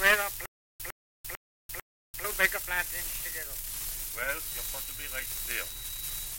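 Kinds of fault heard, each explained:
Stutter with silent gaps: a burst of about 105 ms repeats four times, every 447 ms, with roughly 342 ms of dead silence between bursts, from 0.46 to 2.25 s. This is likely a stalled player or stream replaying its last fragment at each retry, losing the audio in between.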